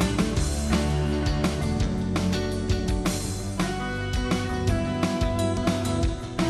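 At 5.57 s the audio jumps forward: compressed frames were skipped, either missing from the file or rejected by the decoder as damaged, so around 70 ms of material never plays. That span points to about three frames of roughly 26 ms each. Unlike a dropout, there is no gap of silence.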